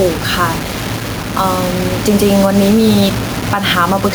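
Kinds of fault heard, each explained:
Low bit depth without dither: The signal was likely rounded to very few levels without dither, and the coarseness heard fits about 5 bits. The error follows the speech, so a grainy, shifting distortion roughly 15 dB below it runs throughout, and quiet tails turn gritty or sputter.
Gain pumping: The input gain is likely set far too high, with a fast limiter pulling it down on each loud syllable. The level swings by about 5 dB, with room noise about 41 dB below the speech, and everything sounds squashed.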